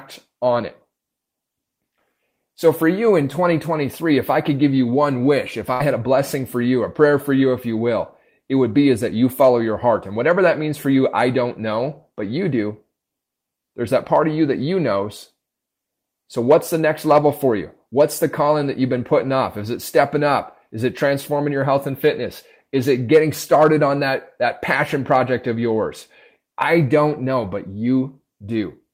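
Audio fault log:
5.73–5.82 s, burst of packet loss: consecutive packets failed to arrive in time after "you one wish if", so the receiver stretched the last sound for about 64 ms while fading it; about 60 ms of speech is missing before "had a blessing for".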